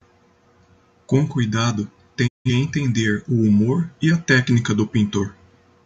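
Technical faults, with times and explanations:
2.26–2.50 s, digital broadcast dropout: the speech fades to silence over about 20 ms and stays muted until it resumes on "entender o humor e". The receiver stopped decoding when its incoming frames were lost or failed their checksum, muting until valid frames returned. Roughly 0.17 s of programme is missing rather than delayed, which fits four lost frames. The speech therefore picks up mid-flow instead of where it stopped.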